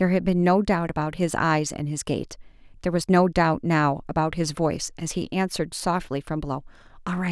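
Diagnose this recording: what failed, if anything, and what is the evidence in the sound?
Nothing in the signal chain appears to have failed: the recorded speech holds a steady level and continuous waveform with no audible dropouts, distortion, timing slips or level jumps at any point.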